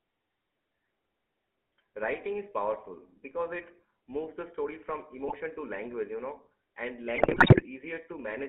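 Throughout, the speech passes through a GSM full-rate codec, plainly audible, which fits a 13 kbps channel. The codec rebuilds the voice from a vocal-tract model driven by a sparse, regular pulse train, within a line band of 250 Hz to 3.5 kHz. The result is a thin, buzzy, gravelly roughness on every syllable.

GSM bit errors come next, first from 5.28 to 5.35 s, between "moves the story from" and "to language you know". Flipped bits reached the decoder and corrupted its filter, pitch or gain values, which fits a few damaged frames. The spectrum warps and the level jumps, producing a short squawk or pop. The second burst runs from 7.16 to 7.63 s, right after "language you know and". It fits roughly twenty-odd corrupted frames and gives a longer stretch of gargling, squawking breakup.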